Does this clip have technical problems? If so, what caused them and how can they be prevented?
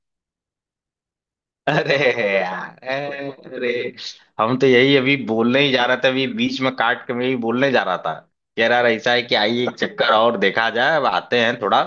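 No, there are no technical problems to report in this speech recording. Nothing here needs a cause traced or a fix applied.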